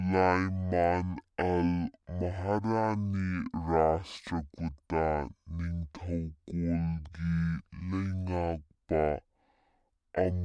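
Wrong sample rate throughout: the speech plays at half speed and a full octave lower, which fits 44.1 kHz material played back at 22 kHz, sounding slow and deep.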